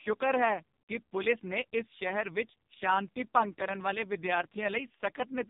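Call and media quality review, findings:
Speech buzzy, thin and synthetic throughout, whole clip. Nothing above about 3.8 kHz. Probable component: AMR narrowband mobile codec (AMR-NB) on the call path. Mechanism: 8 kHz sampling removes all upper band; vocal-tract model driven by sparse pulses per 5 ms. Heavy coding damage fits the lowest 4.75 kbps mode.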